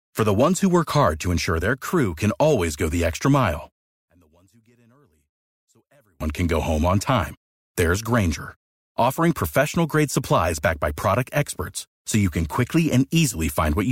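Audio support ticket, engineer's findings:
3.89–6.21 s, after "go the extra mile": speech falls about 38 dB to a faint residue. Likely one channel inverted, cancelling centred content in the mono sum. Faint residue rather than silence separates it from a dropout.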